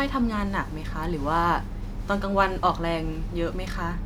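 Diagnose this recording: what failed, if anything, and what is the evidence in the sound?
Nothing stood out on listening to this speech recording that would point to a failure at any stage of the chain.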